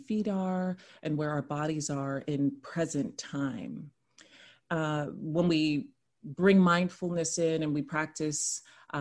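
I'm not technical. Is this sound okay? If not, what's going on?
Yes, this one's fine: nothing in it stands out as a technical problem, so there's nothing to worry about here.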